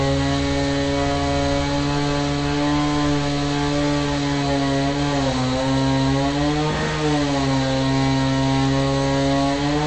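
From start to end, nothing remains above about 8.3 kHz, and the material below that edge has a watery, swirling texture as weak frequency components drop in and out from one short block to the next. That points to MP3 compression, likely at a low rate such as 48 kbps, where the encoder runs short of bits. A plain low-pass filter would also remove the top octave, but it would leave the remaining sound steady instead of churning.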